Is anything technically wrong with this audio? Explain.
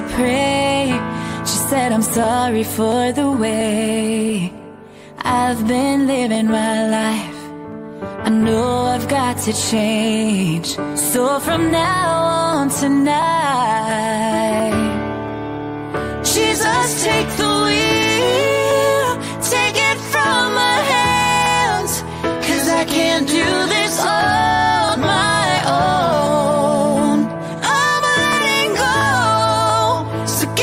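Yes. From 0.18 s to 30.38 s there is a regular click, about every 0.69 s. That makes around fifty clicks across the clip. This is most likely clock drift buffer slips. Two devices seem to run on separate clocks that disagree by a few hundred parts per million. The buffer between them slowly drifts until a small block of samples, perhaps fifteen or so, is dropped or repeated. Each slip is heard as a short tick or pop in the sound.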